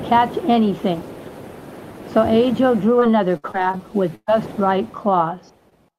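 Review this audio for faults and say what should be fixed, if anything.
From 2.99 to 4.30 s there's repeated packet loss giving that robotic sound: six gaps, about 260 ms missing in total, the longest 125 ms. Each hole gets patched by stretching the last bit of sound, so about a fifth of that stretch is filler and comes out choppy. A bigger jitter buffer plus forward error correction would help.

Then at 5.70 to 5.73 s there's a short concealed packet loss. About 20 ms never arrived, and the decoder papered over it by extending the preceding sound and blending back in, leaving a quick smear. Enabling FEC or a touch more jitter buffering would cover a single drop like that.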